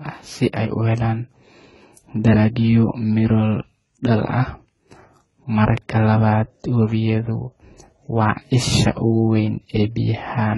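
Transcoding between lossy codecs runs throughout the speech. Nothing is present above 11.5 kHz, and two layers of artefacts are heard together: the smeared, synthetic-sounding upper band typical of HE-AAC at a very low rate, and, on top of it, the grainy, swirling texture of AAC-LC re-encoding those earlier flaws. The likely cause is an HE-AAC stream near 16 kbit/s that was later re-encoded as AAC-LC near 32 kbit/s. The higher second rate could not restore what the first pass discarded.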